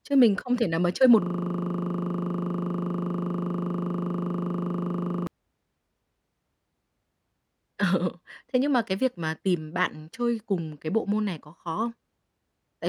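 From 1.22 to 5.27 s, a system hang loop: playback froze while the hardware kept replaying one 40 ms buffer, giving an exact 25 Hz buzz, not irregular stutter.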